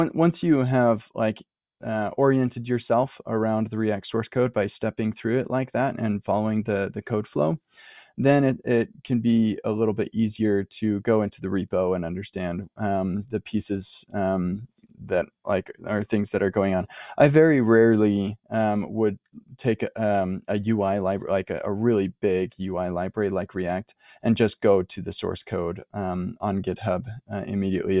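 No technical faults are audible in the speech.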